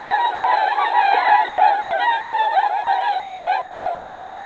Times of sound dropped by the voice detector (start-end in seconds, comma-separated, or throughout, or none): 2.21-2.33, 2.84-2.87